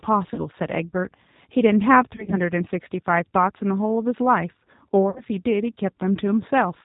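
Throughout the speech, the G.729 codec leaves a rough, slightly synthetic quality. The voice is rebuilt from a vocal tract filter, a pitch predictor and a handful of pulses per frame, so fine detail is lost. On a spectrogram, all energy stops in a hard ceiling at 4 kHz, and the harmonics look smeared. The damage is plainly audible and fits a low-rate stream at about 8 kbit/s.

VoIP packet loss concealed by the speech codec first appears at 0.34 to 0.44 s. About 40 ms of audio is missing, which fits two lost packets. Further losses occur from 2.16 to 2.40 s, where 80 ms is lost in runs of up to 40 ms scattered over 160 ms, and from 5.10 to 5.23 s, where 60 ms is lost. Each time, the decoder repeats its last pitch and filter at falling gain, so the sound smears into a buzzy tone or coloured noise that fades. The waveform shows a decaying, overly regular stretch with weak recovery just after. 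On a spectrogram, flat repeated harmonics replace the normal formant movement.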